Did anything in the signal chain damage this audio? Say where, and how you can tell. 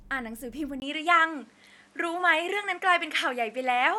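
Yes. At 0.8 s, after a 20 ms gap, the speech loses everything above 11.5 kHz, shifts level about 5 dB and gains faint background noise: at the driver stage, likely an input switched to a poorer device.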